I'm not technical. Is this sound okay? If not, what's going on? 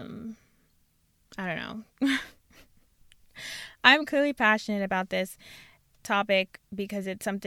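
Yes, this recording sounds fine. I couldn't hear any technical problem anywhere in it.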